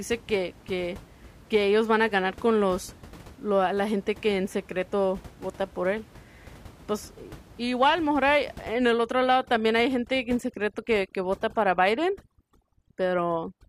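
From 8.74 s to the end, overdone noise removal strips bands near the room noise (about 23 dB below the speech), leaving twinkling specks.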